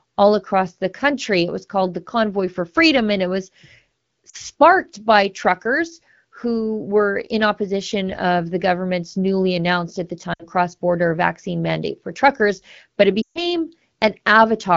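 Lost AMR speech frames at 4.29–4.36 s, 10.34–10.46 s and 13.22–13.44 s. The decoder repeats the last good pitch and vocal tract settings at falling gain, so the speech drops to near silence within two frames, most at 13.22 s. Spectrograms show frozen, smeared bands dimming into a near-gap.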